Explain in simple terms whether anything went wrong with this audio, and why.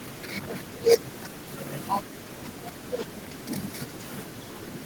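Nothing went wrong here.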